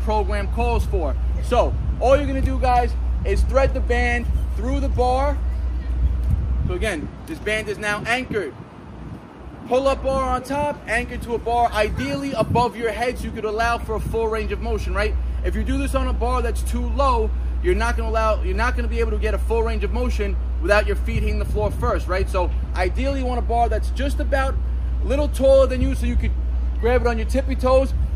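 No technical fault can be heard anywhere in the audio. Nothing in the recording points to a problem in how it was captured or carried.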